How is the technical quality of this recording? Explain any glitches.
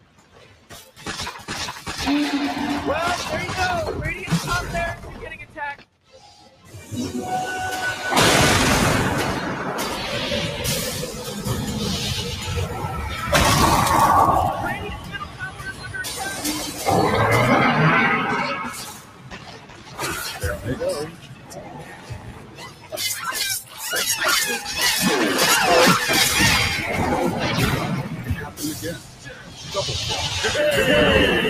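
The recording is marred by a noise suppressor left running on material it was not built for. Its gain keeps shifting, so levels swing by roughly 15 dB and the sound pumps and thins out as steady parts and tails are pulled down while attacks pass through.

The noise suppressor was applied to music or sounds throughout. A processor tuned for speech treats sustained tones, ambience and reverb as noise and keeps turning them down. Level fluctuates by around 15 dB, with held sound sinking and decays cut short.

In seven places it went further and mistook the sound itself for noise: 0.00–1.02 s, 4.96–6.91 s, 14.75–16.87 s, 18.58–20.67 s, 21.05–22.96 s, 23.63–23.81 s and 28.05–29.75 s. These stretches of sound cut by the noise suppressor drop by about 10 to 12 dB and sound sunken.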